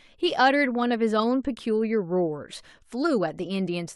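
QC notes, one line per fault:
No audible faults detected in this speech clip.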